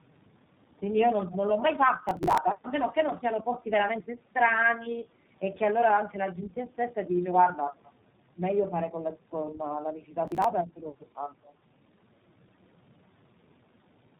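Throughout, the speech carries tandem speech coding: it passed through two low-rate speech coders in a row, consistent with G.729A and then iLBC with G.711 between them. Each re-encoded the previous coder's errors, leaving rough, muffled, warbly speech with nothing above 3.8 kHz.

From 2.09 to 2.38 s, processor overload crackle appears as gritty tearing. Buffers that missed their deadline were simply skipped, and the gaps fit roughly 10 ms buffers, about twenty of them dropped, each leaving a hard-edged hole.

From 7.77 to 7.83 s, a very faint delayed copy of the speech returns about 183 ms late, some 40 dB below the main signal. This echo leak is likely residue that a far-end echo canceller failed to remove from its microphone pickup.

From 10.28 to 10.44 s, a shorter burst of the same processor overload crackle recurs, again consistent with roughly 10 ms buffers being skipped, here about ten drops.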